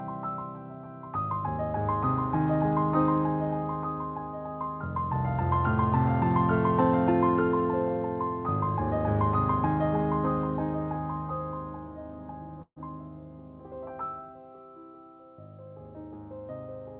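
Band-limited call audio with nothing above 4 kHz, consistent with a G.711 A-law call path, carries a burst of packet loss from 12.62 to 12.79 s. The receiver extends the last sound for about 140 ms, fading it before roughly 60 ms of silence, and playback resumes with about 150 ms of the original audio missing.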